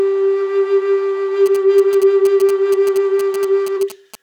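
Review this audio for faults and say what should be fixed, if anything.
From 1.46 s to 4.15 s the music picks up GSM signalling bursts: that galloping dit-dit-dit of short buzzes at 217 Hz, sitting roughly 15 dB under the music. A 2G phone close by was handshaking with the network, and something in the audio chain rectified its RF pulses into audible sound. Keeping phones well away from the rig, or in flight mode, and using shielded, properly grounded cables will prevent it.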